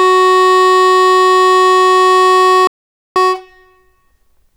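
An audio dropout to silence hits this music clip from 2.67 s to 3.16 s, removing about 485 ms. The music cuts off mid-flow into silence with no room tone, then resumes abruptly. The likely cause is a briefly lost input, with the recorder writing zeros meanwhile.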